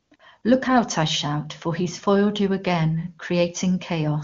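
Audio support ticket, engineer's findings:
AMR comfort noise at 0.01–0.11 s (100 ms), 0.15–0.19 s (40 ms), 0.41–0.43 s (20 ms). Real background swapped for smooth, steady synthetic noise switching in and out. Phone's voice activity detection stopped speech frames; the receiver generated the filler. Steady, not silent or glitchy like packet loss. AMR-WB path itself clean, consistent with a high mode.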